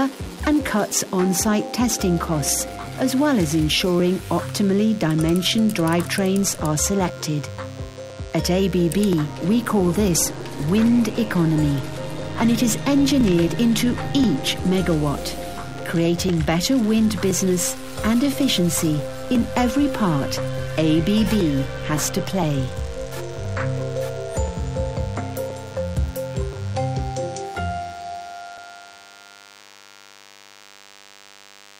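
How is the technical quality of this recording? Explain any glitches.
The recording has two technical faults: a constant buzz underneath the whole clip, and a regular series of small ticks.

A DECT cordless phone buzz runs from start to finish, about 25 dB below the main sound. A nearby DECT handset or base transmits a radio burst every 10 ms, and the audio circuitry rectifies it into a 100 Hz buzz rich in harmonics. It sounds thin and steady. On a spectrogram it shows as evenly stacked horizontal lines at 100 Hz multiples, and on a zoomed waveform as a repeating 10 ms pattern.

Periodic USB or driver dropouts occur every 1.02 s, from 0.91 s to 31.64 s, roughly thirty in all. Each time, a background process stalls the USB bus or audio driver, and about a millisecond of audio is skipped rather than replaced with silence. The join produces a brief tick or pop wherever signal is present. On the waveform each appears as a small discontinuity or step. 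On a spectrogram each is a vertical broadband stripe, spaced evenly across the timeline.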